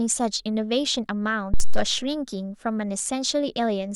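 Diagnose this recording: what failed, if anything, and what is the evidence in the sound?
A supply switched on or off at the analogue input stage while the microphone was live, and the voltage step passed through the coupling capacitors into the speech signal. The result is a phantom power thump at 1.54 s: a deep, low-frequency thud peaking at about -10 dBFS, falling away with an 86 ms decay, and settling by 1.92 s.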